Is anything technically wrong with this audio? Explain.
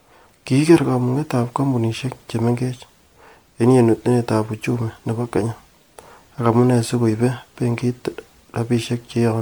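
Yes. Throughout the speech there is generation loss, likely from roughly ten successive MP3 encodes at around 128 kbit/s. Each pass requantised the audio on a shifted frame grid, compounding noise and spectral holes, so it sounds swirly, hollow and smeared, with blurred attacks. Content reaches about 20.1 kHz.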